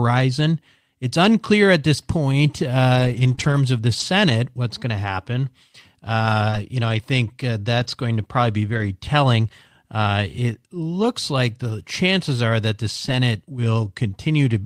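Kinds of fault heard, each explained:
lost packet rebuilt from error correction: lost audio was replaced by a low-bitrate copy carried in the next packet, leaving no gap but a rougher, noisier stretch, notably from 2.95 to 3.33 s and 3.40 to 3.58 s.
short concealed packet loss: roughly 20 ms arrived too late, so the decoder extended the preceding sound, producing brief smears near 3.35 s and 6.50 s before blending back.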